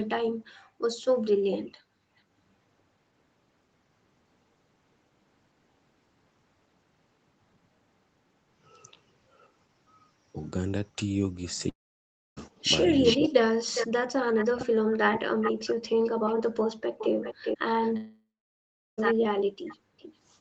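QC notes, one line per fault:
0.30–0.82 s, background gated by the echo canceller: the room sound under the speech sinks by as much as about 38 dB for roughly half a second, then comes back. The canceller clamped the microphone while the far end was playing on the loudspeaker and released it afterwards. Unlike a dropout, nothing is lost from the timeline and there is no fading buzz. Only the ambient bed ducks and swells back.
11.69–12.39 s and 17.97–19.00 s, long network dropout: in the first, about 0.68 s of audio never arrives. The last sound is drawn out into a buzz that fades, leaving near-silence for about 0.63 s. The second gap loses about 1.02 s, with roughly 0.73 s of silence. Playback resumes further on with the missing stretch skipped. This is likely packet loss on the network bridged by concealment, which is different from a gate because the content itself is gone.
13.03–20.15 s, echo leak: a distinct second copy of the speech trails the original by 405 ms and sits only around 5 dB below it. 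The far side's loudspeaker is being picked up by its microphone and likely not fully cancelled, so it returns down the line. The fixed, long delay and the near-equal level set it apart from room reverberation, which smears instead of repeating.
13.16–13.70 s and 14.32–15.99 s, speech suppressed in double talk: during these overlaps the talker's speech is chopped, dipping by around 40 dB in pieces totalling roughly 0.3 s and 1.5 s. With both sides active, the echo canceller likely mistook the near talk for echo and pulled it down. Unlike a network dropout there is no fading fill and no skipped time. The speech drops out in fragments only while the other side is talking.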